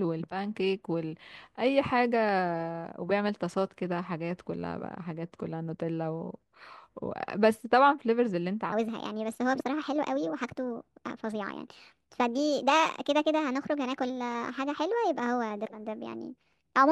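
From 8.72 s to the end at 16.91 s, the speech suddenly turns high and hurried, running about 1.38 times too fast and roughly 5.5 semitones sharp, with pitch and tempo rising together. This is a wrong sample rate fault. The samples are being played back faster than they were captured, with no conversion between the two rates. The ratio fits 32 kHz audio played at 44.1 kHz.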